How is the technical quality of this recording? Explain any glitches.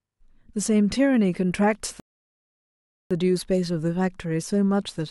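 The speech has one glitch, a rebuffering stall from 2.00 to 3.11 s: playback exhausted its downloaded audio and waited for more, so sound drops to silence for 1.11 s, then resumes seamlessly.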